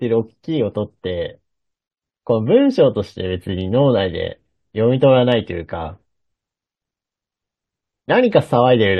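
Nothing in the speech stood out as a technical problem on listening.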